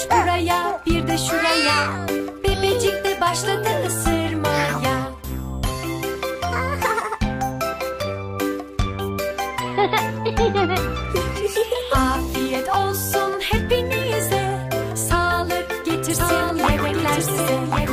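From 16.10 s to the end, a second, somewhat quieter copy of the audio trails about a second behind: a doubled audio track, likely from a second, slower capture path.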